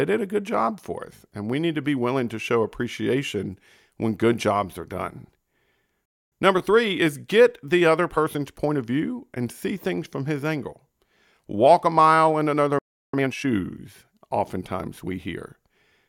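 At 6.05 s the speech cuts out for about 0.26 s, a playback stall, likely the player running short of data, then resumes where it stopped. A time-compressed catch-up follows from 6.32 to 8.92 s, the player trimming its backlog by running at 1.1 times speed with pitch unchanged, audibly hurried. A second stall silences the audio at 12.79 s for about 0.35 s, likely from the same starved or blocked output. A brief catch-up runs from 13.14 to 13.48 s at double speed.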